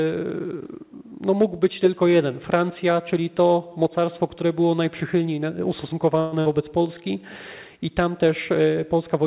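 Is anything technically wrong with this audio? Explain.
Yes, there are two glitches close together, both on top of a narrowband call path where G.711 A-law leaves nothing above 4 kHz.

At 6.2 to 6.34 s there's a call audio freeze. The last sound is stretched into a fading buzz or hiss for about 120 ms, most likely because packets stalled and the jitter buffer ran dry. Nothing is lost; the audio just resumes about 120 ms later than before.

Right after, at 6.40 to 6.47 s, comes a burst of packet loss. The receiver papers over roughly 55 ms with a decaying continuation of the last sound, then jumps ahead, so about 60 ms of the original audio is simply gone.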